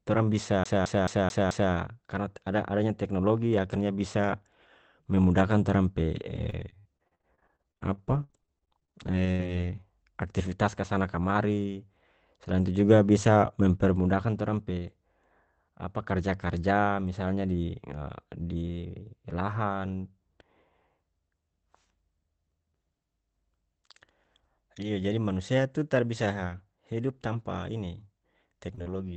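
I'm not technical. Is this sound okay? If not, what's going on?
No. There are two separate problems.

CD stuck on one turn, from 0.64 to 1.72 s: the same short slice of speech, about 0.22 s long, plays five times in a row with a tiny silence at each restart. That fast, even stutter is what a skipping CD sounds like: a damaged spot makes the player jump back and replay the same piece on every spin of the disc.

Repeated packet loss (robotic sound), from 6.36 to 9.84 s and again from 28.75 s to the end: the speech turns choppy, with bits missing. On a call, audio travels in small packets, and here many arrived late or not at all. In the first stretch there are 30 holes, the longest about 76 ms, covering roughly a quarter of that span. The call software patches each hole by stretching the last sound it received, and that produces the robotic tone.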